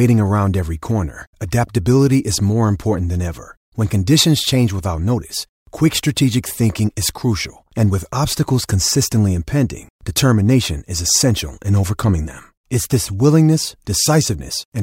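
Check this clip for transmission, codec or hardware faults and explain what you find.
Nothing turns up: the check finds no faults in this clip to explain.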